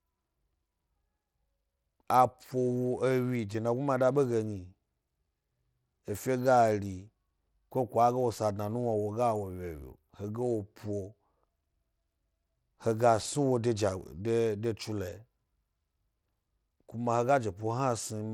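From start to finish, the speech sounds gritty with flickering treble, most likely Bluetooth SBC compression at a low bit pool, which fits roughly 96 kbps.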